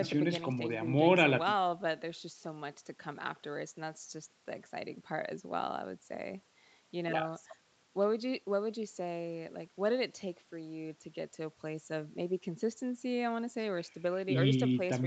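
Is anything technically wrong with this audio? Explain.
No, nothing in this speech recording points to a technical fault. What you hear of the call path is its band limit: nothing sits above about 8 kHz, which fits a wideband call codec.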